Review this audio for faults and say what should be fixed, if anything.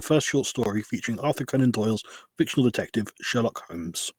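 A block of digital silence runs from 0.63 to 0.66 s, just after "first short": a 22 ms hole with hard edges, as though the output buffer went unfilled. Fix by enlarging the audio buffer or giving the audio thread higher priority.

A lost packet rebuilt from error correction shows up at 2.13 to 2.19 s, just before "fictional detective", and at 3.31 to 3.41 s, just after "fictional detective". The 40 ms and 60 ms stretches sound rougher and noisier, which fits two and three lost packets replaced by low-bitrate in-band copies. Reduce network packet loss, or add jitter buffering and retransmission, so the decoder rarely needs those copies.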